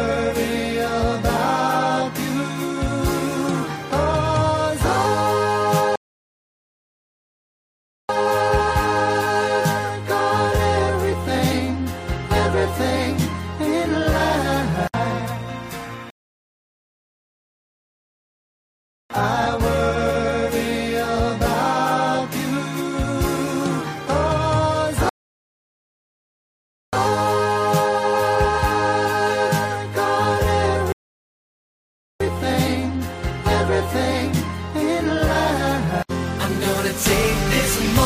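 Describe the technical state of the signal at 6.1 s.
At 6.1 s the signal is inside a rebuffering stall that runs from 5.96 s to 8.09 s. Playback has drained its store of downloaded audio and halted to wait for more data, so the output drops to silence for roughly 2.13 s. When enough arrives, the sound picks up at exactly the point where it broke off. No material is skipped, but the stall adds about 2.13 s to the running time.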